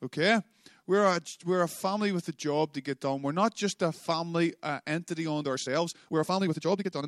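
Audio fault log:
5.4–7.08 s, time-stretched section: Right after "a family uh entity" the pace jumps to about 1.78 times normal and stays there to the end, sounding rushed while the pitch holds. This is likely software squeezing the audio to fit a length, cutting out short pieces to keep pitch intact. On a spectrogram, harmonics keep their spacing while syllable patterns crowd together. The waveform shows compressed envelopes with abrupt seams.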